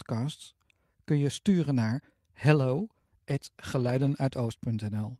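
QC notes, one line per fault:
2.57–4.29 s: call bitrate drop, starting just after "kun je sturen naar". The call's bandwidth estimate falls and the encoder is pushed onto a far smaller bit budget. It quantises the sound more coarsely and trims the high frequencies, so the audio turns rough and muffled. It stays at its worst for about 1.66 s before clarity returns. The degradation fits a fall from around 48 kbps to about 18 kbps.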